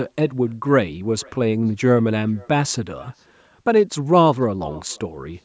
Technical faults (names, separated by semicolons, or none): echo with no canceller